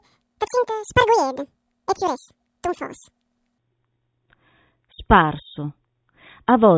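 Speech opens with a wrong sample rate fault from 0.0 to 3.58 s: the voice runs twice as fast and a full octave (12 semitones) high, which fits 8 kHz audio played at 16 kHz. A spectrogram shows harmonics spaced twice as widely and energy reaching 8 kHz rather than 4 kHz, while the waveform's syllable envelopes look squeezed to half their length.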